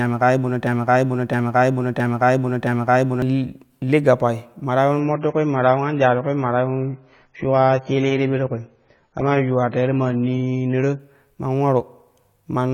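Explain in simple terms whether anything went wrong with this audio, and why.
A broken-record loop runs from the very start to 3.22 s, just before "li li gappai ma". The same two-thirds of a second of speech repeats exactly, four times in a row. The player or stream likely stalled and kept resending its last piece, so the speech meant for that stretch is missing.

From 5.00 s to 11.00 s, right after "li gappai ma ta", the audio switches to an adaptive stream at a lower bitrate. The connection slowed, so a cheaper, lower-quality version played. Everything above 7 kHz disappears, making the voice sound suddenly dull and muffled, with no gap at the switch.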